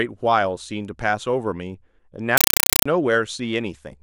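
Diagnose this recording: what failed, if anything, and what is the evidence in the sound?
Playback link, 2.37 to 2.86 s: loud static bursts of 5.33 ms at 31.25 Hz indicate a compressed stream played as audio, fitting undecoded AC-3 data.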